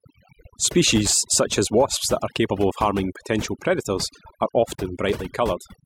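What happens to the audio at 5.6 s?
At 5.6 s the speech carries overdone noise removal, and it runs through the whole clip rather than starting there. The noise reduction was set too strong. It pulls individual frequency bands far down whenever they sit near its noise estimate. Quiet parts of the voice get cut along with the background noise. Between sounds the background drops to near silence with twinkling specks.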